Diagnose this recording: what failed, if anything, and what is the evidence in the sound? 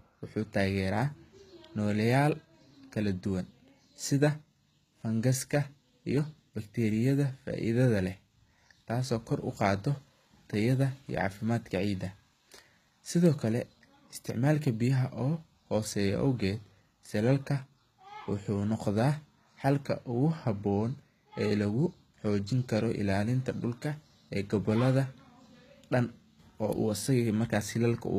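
The fault sits at the codec stage and runs through all of the speech: the top octave sounds bright but synthetic, s sounds come out gritty and metallic, and nothing is present above 14.9 kHz. This is likely HE-AAC compression at a very low rate, roughly what a 20 kbps stream would produce. The treble is rebuilt from copied lower bands rather than coded, so it doesn't track the real sibilance. A plain low-pass filter would instead sound dull, with no false brightness.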